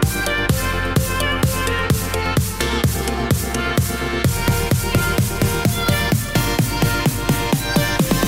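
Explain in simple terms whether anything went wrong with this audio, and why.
Nothing went wrong here: the signal holds steady the whole way, with no technical problems anywhere in the recording.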